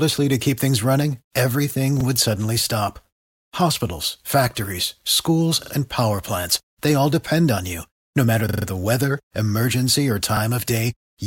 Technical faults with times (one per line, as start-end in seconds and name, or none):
2.01-2.05 repeated buffer
5.63-5.72 repeated buffer
8.49-8.66 repeated buffer
10.37-10.41 repeated buffer